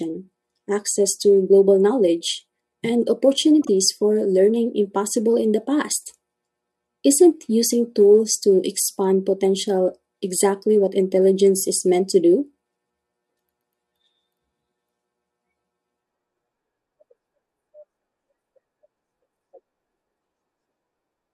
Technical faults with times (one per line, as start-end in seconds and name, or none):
3.62-3.68 frames out of order